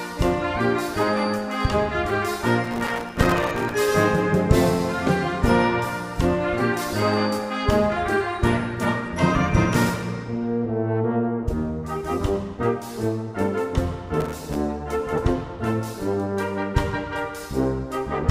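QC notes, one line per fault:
2.64–3.74 s, processor overload crackle: a dense burst of tiny silent dropouts tears through the sound for about 1.1 s. The processing missed a long run of buffer deadlines, each miss leaving a hard-edged gap, which fits very short buffers of around a millisecond and a half.
14.20–14.55 s, processor overload crackle: a shorter, thinner burst of the same gritty crackle, about 0.35 s, with fewer missed deadlines before the load eased.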